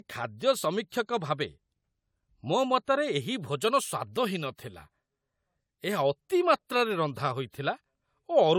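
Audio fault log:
throughout generation loss: swirly, hollow smearing and blurred attacks, worse than one AAC pass near 96 kbit/s gives, likely from about four re-encodes.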